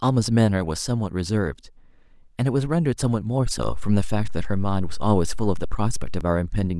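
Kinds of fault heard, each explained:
DC step: at 3.63 s the waveform's zero line jumps by about -22 dBFS and holds until 6.21 s, then steps back, giving a low thump at each edge while the speech continues unchanged. The waveform shows a shifted baseline; the spectrogram shows brief low-frequency smears.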